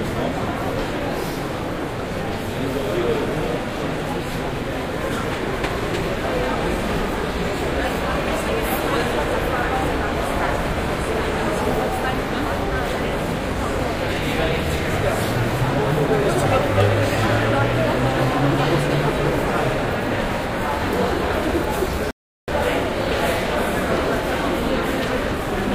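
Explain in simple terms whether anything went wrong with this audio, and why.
Near the end, from 22.11 to 22.48 seconds, the sound stops dead and goes silent, then carries on exactly where it left off. This is a rebuffering stall: the player ran out of downloaded audio and waited about 0.37 seconds for more. Unlike a dropout, nothing is skipped; the gap only adds time.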